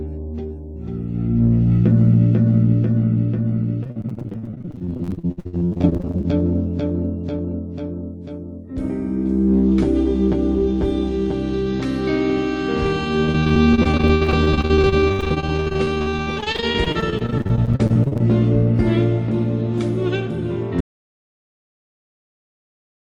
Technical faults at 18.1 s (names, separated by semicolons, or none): repeated packet loss (robotic sound)